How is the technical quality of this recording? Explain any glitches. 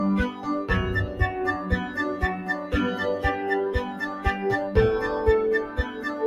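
The recording is compromised by a speech-oriented noise suppressor that is acting on non-speech material.

Throughout the clip the level pumps and thins. Sustained parts and decaying tails keep sinking while sharper onsets pass through, with the loss swinging by around 10 dB. This is a noise suppressor applied to music or sounds. It treats steady, held content as if it were background noise and pulls it down, so the texture flutters instead of holding steady.

In four places the sound is cut by the noise suppressor more deeply. It dips from 0.31 to 0.47 s by about 7 dB, from 2.39 to 2.73 s by about 7 dB, from 3.91 to 4.25 s by about 6 dB, and from 5.66 to 6.06 s by about 7 dB. Each dip lasts a few hundred milliseconds at most. In each, the suppressor judged a steadier or fading passage to be noise and clamped it, cutting its body or decay short.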